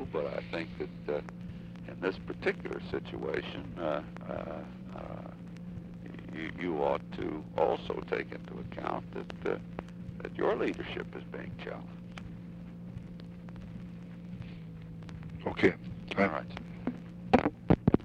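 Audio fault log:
14.56 to 15.80 s, drift correction step: for about 1.2 seconds the sound slows by roughly 5.7% and drops in pitch by about a semitone (close to 101 cents) all at once, then snaps back to normal at 15.80 s. Speed and pitch move together, which points to the playback rate itself being changed. The likely cause is clock-matching software stepping its rate down to rebalance a buffer before returning to the original rate.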